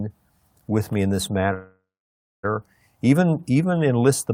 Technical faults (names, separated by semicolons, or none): call audio freeze